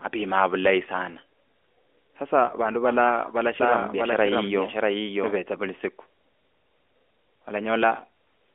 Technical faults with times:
2.46-2.55 lost AMR speech frames
3.60-5.38 doubled audio track

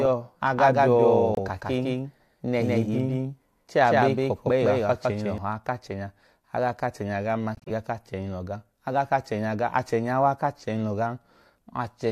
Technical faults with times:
0.00-5.38 doubled audio track
1.34-1.39 corrupt frame muted
7.55-7.71 corrupt frame muted

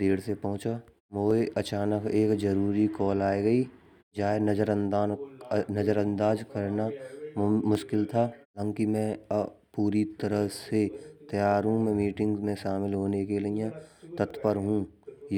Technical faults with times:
1.31 dropped samples
7.75 dropped samples
14.30 dropped samples

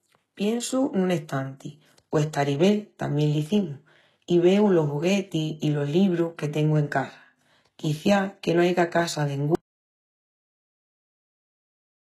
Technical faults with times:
0.00-12.01 HE-AAC compression
9.55-12.01 audio dropout to silence

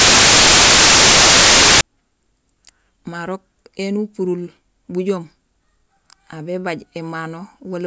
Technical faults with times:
0.00-1.81 file tags played as audio

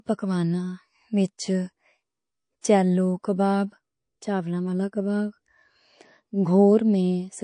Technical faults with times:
0.00-7.43 MP3 compression
2.61-2.64 pre-echo

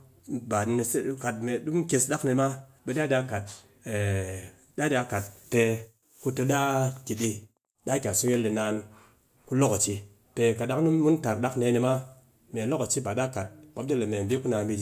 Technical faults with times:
none

